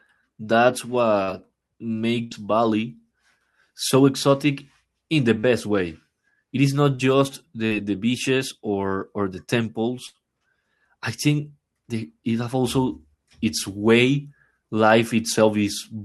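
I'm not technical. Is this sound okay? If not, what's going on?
No. At 1.23, 5.39, 6.95 and 7.67 seconds there are brief smears or wobbles, and a short sound can vanish. This is short concealed packet loss: about 40 ms of the call arrived too late, and the receiver patched the hole by stretching the sound just before it.

At 2.24 and 10.06 seconds the audio briefly turns into a held buzz or a fading hiss, then jumps ahead. This is a burst of packet loss: about 80 ms went missing in a row, so the receiver kept the last sound going, faded it, and resumed further on.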